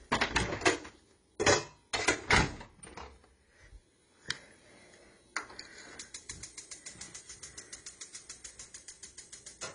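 Throughout, the sound was likely encoded at a very low bitrate and then saved again at a high bitrate, so nothing above 10.1 kHz survives, leaving it dull, with the first encoding's artefacts still there.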